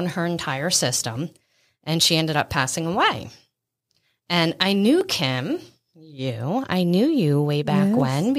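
At 2.02 s, between "her entire system and" and "she ended up passing", the speech jumps forward by a few milliseconds, and the same skip recurs at 5.01 s and 8.00 s. This is audio missing between chunks, likely from a recorder closing one 3.0 s block and opening the next. The sides butt together with no silence, unlike a dropout, and the strict 3 s spacing separates it from random packet loss.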